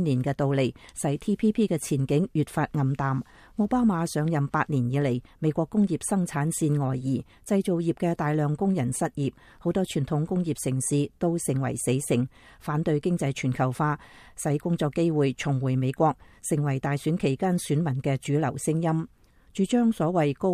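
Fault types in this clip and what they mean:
Nothing stands out here; there's no technical fault to point to anywhere in the recording.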